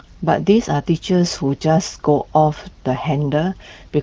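No technical faults can be heard anywhere in the recording. The speech carries the bandwidth and light coding texture of the AMR wideband (HD Voice) codec, clear rather than rough, which fits one of its higher rates, around 15.85 kbit/s.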